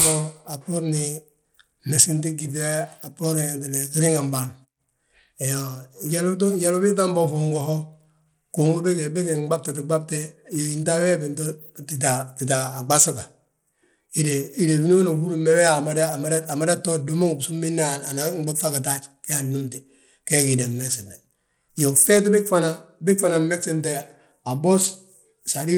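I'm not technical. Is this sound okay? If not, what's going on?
No. From start to finish the speech has a rough, grainy edge, and the crisp high sounds seem thin and unsteady, as if they keep slipping in and out. This is likely Bluetooth SBC compression. SBC is the basic codec Bluetooth uses to send sound over the air. It splits the audio into a few frequency bands and squeezes each one crudely to save data, so the treble suffers and a gritty noise rides along.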